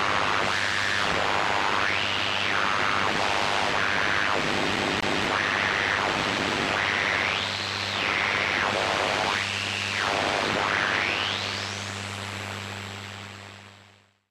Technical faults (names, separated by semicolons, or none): CD stuck on one turn